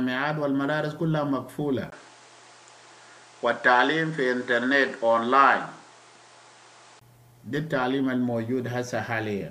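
At 1.90 s, after a brief dropout of about 20 ms, the sound abruptly loses its top end, with nothing above 9.8 kHz, and shifts in level by a few decibels while a new, different background noise appears well beneath it. At 7.01 s it switches back just as suddenly. This is likely an input switched to a poorer device. Unlike a filter being applied, the tone, level and noise floor all change together at a clean cut.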